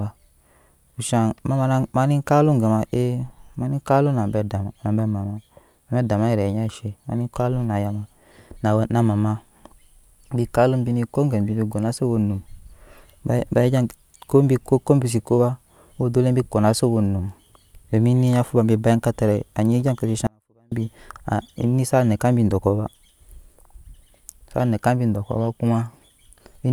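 At 20.27 s the speech cuts out abruptly for about 0.45 s, leaving only a faint leak roughly 40 dB down, then snaps back at 20.72 s. This audio dropout to a faint residue is likely a brief signal loss while the path after it stayed live.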